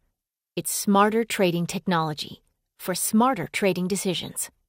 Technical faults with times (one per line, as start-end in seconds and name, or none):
3.44-3.46 DAB burbling